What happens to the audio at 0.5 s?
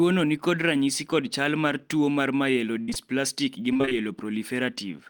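Nothing goes wrong at 0.5 s; the speech there plays through intact, with no dropout, click, distortion or other fault.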